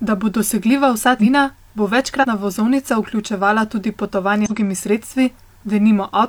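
Speech with compressed frames skipped three times: after "bo dosegljiva vsa" at 1.12–1.25 s, before "vozovnica vključevala tudi" at 2.19–2.25 s, and after it at 4.42–4.52 s, dropping roughly a fifth, a tenth and a fifth of a second. Unlike a dropout, there's no silent gap; the audio simply jumps ahead.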